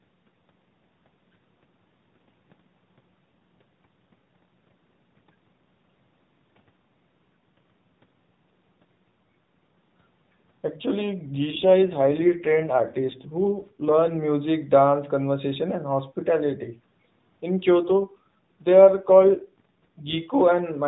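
A speech clip carried over a narrowband AMR mobile call has two AMR rate drops, from 11.52 to 14.23 s and from 17.79 to 20.18 s. In each, the voice turns rougher and more synthetic with no gap or band change, which fits the codec stepping down from 12.2 kbps to 5.9 kbps to protect a weak radio link. A spectrogram keeps the same 4 kHz ceiling but shows blurrier, coarser harmonics, while the waveform stays continuous.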